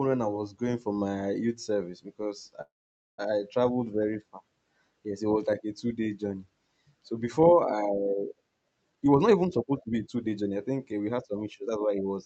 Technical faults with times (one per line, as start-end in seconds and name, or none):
2.61-3.20 call audio freeze
8.90-11.98 jitter buffer speed-up